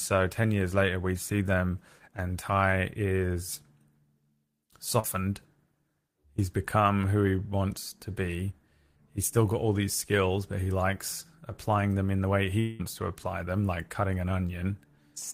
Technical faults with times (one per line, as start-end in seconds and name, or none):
4.99-5.06 short concealed packet loss
10.64-10.68 short concealed packet loss
12.60-12.81 long network dropout